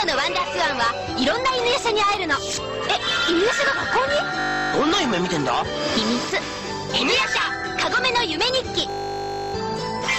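A steady 50 Hz buzz replaces the sound from 4.4 to 4.72 s and again, twice as long, from 8.9 to 9.54 s. This is a system hang loop: the system stalled while the hardware replayed the same 20 ms buffer, with little or no audio lost afterward.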